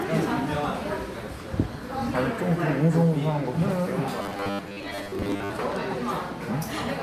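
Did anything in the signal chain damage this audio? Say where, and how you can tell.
Yes. From 4.22 to 5.52 s the audio takes on a rigid, metallic buzz pitched at 100 Hz, the sign of robotic sound from repeated short buffers. The damage is likely at the driver or buffer stage: incoming audio stalled, and the software kept replaying the last fragment while the real material was dropped. A 100 Hz repetition rate points to a roughly 10 ms buffer. Around two thirds or more of that stretch is repeated material, which is why the sound keeps only its rough outline.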